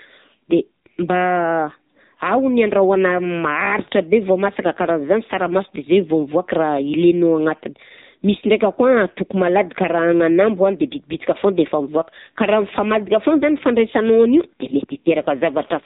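Throughout, heavy AMR narrowband mobile codec damage removes everything above 3.8 kHz and adds a buzzy, synthetic edge that simple band-limiting lacks, consistent with a low 6.7 kbps mode.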